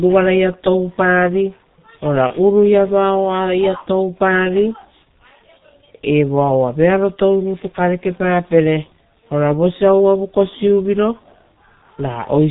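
Throughout, the speech carries G.723.1 codec damage. The heavily muffled, hoarse tone fits its 6.3 kbit/s mode, and a spectrogram shows nothing above 4 kHz and smeared consonant bursts. From 2.27 to 2.32 s comes VoIP packet loss concealed by the speech codec, consistent with one lost 30 ms frame. The decoder extends its last pitch and filter into a fading buzz or coloured noise, visible as a shrinking waveform envelope.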